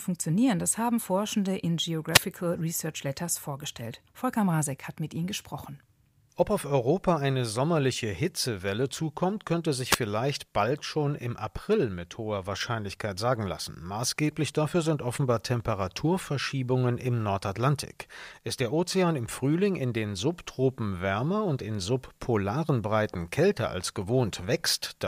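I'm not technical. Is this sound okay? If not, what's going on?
No. The speech has two wireless microphone noise hits, short bursts of static at 2.12 to 2.21 s and 9.90 to 9.97 s. The radio signal from the microphone briefly faded, so the receiver's own hiss rose for a fraction of a second.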